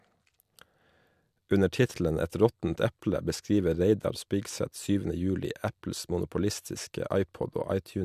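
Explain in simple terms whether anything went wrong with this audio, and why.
Nothing went wrong with this speech recording that a listener can pick out. Listening closely at every moment turns up no technical problem to explain.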